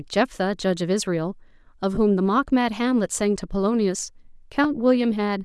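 Throughout, the speech carries a grainy, breathy edge, likely from Bluetooth LC3 compression: upper bands are zeroed and noise-filled, showing as speckled, patchy texture above the retained spectrum.

At 1.95–1.98 s and again at 4.64 s, lost LE Audio frames are concealed by repeating the previous spectrum with scrambled phase, heard as a brief noisy smear and seen as blurred harmonics.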